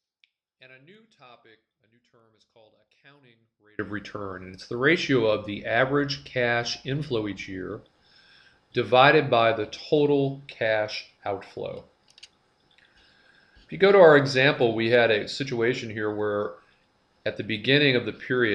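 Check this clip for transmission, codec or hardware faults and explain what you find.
One fault is present, in the opening stretch from 0.0 to 3.79 s. Here the sound collapses to a faint residue about 31 dB below normal level; the likely cause is one channel inverted, so material common to both channels cancels when summed to mono and only their difference survives. Unlike a dropout or mute, the signal never reaches true silence. A faint trace of the sound remains throughout.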